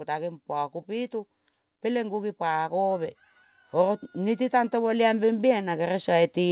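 From 3.72 s to the end, automatic gain rising: the gain control judged the input too quiet and kept raising it, so speech and background swell together steadily.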